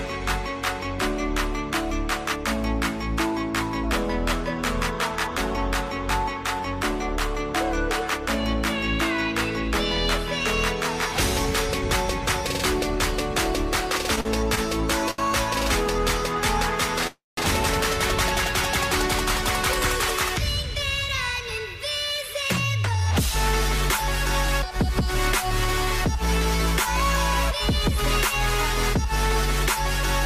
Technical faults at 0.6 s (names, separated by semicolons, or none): none